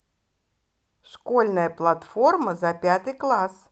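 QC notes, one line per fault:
No faults are heard anywhere in the speech. It has come through a WebRTC call path, and its top end stops at about 8 kHz, which fits the Opus codec set to that bandwidth.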